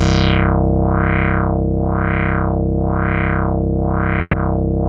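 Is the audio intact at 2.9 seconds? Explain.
Yes, the audio is intact at 2.9 seconds, with nothing there to disturb the signal.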